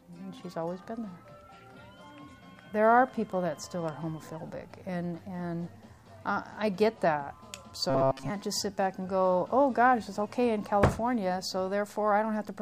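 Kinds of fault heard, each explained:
Robotic sound from repeated short buffers: From 7.90 to 8.31 s the sound collapses into a rigid, metallic buzz locked at 134 Hz while still loosely tracing the original contour. That pitch matches a segment of roughly 7.5 ms being looped. The likely cause is audio arriving too late, with the playback side filling the gaps by repeating its last small chunk. Most of that stretch appears to be repeats rather than fresh audio.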